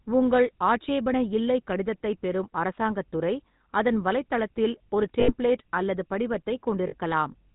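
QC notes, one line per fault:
throughout GSM full-rate codec: the speech has a constant buzzy, gravelly roughness and nothing above 4 kHz, consistent with 13 kbps full-rate coding. The vocal tract is modelled and excited by regularly spaced pulses that keep only a third of the excitation samples.
5.20–5.33 s and 6.88–6.94 s lost GSM frames: just after "துறை அதன் வலைத்தளத்தில் ஒரு", about 80 ms of sound is held as a rough metallic ring, fitting four lost frames. A 40 ms hold follows later, fitting two frames. Each time the decoder repeats the last good frame's parameters.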